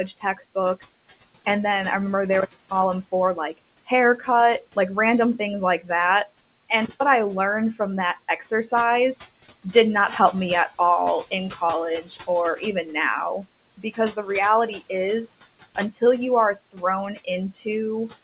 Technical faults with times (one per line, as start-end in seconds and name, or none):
0.00-18.23 noise suppressor artifacts
0.07-0.83 speech cut by the noise suppressor
2.33-2.82 intermittent contact
3.03-4.77 speech cut by the noise suppressor
5.39-5.90 speech cut by the noise suppressor
6.83-7.02 intermittent contact
11.31-14.92 speech cut by the noise suppressor
16.55-18.23 speech cut by the noise suppressor